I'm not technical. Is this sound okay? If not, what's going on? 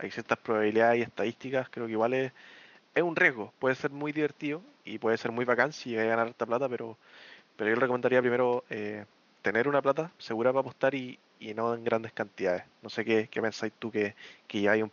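Yes, this speech recording sounds okay with no problems.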